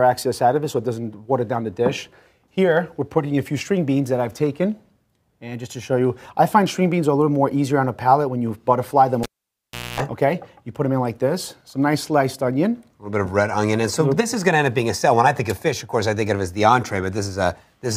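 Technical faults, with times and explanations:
9.23 to 10.00 s, cable pulled and plugged in: a pop, about 0.72 s unplugged, including a 0.24 s burst of 60 Hz mains buzz as only the plug tip touches, and a second pop when sound returns. That buzz and the paired pops set it apart from a plain dropout.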